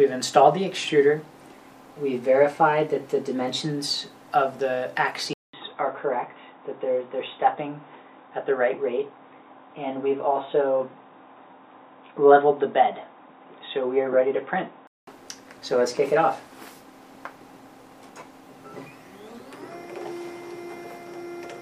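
The input likely switched to a poorer device from 5.33 to 15.07 s: after a 200 ms gap, the audio narrows to nothing above 3.8 kHz, with new low background noise and similar level.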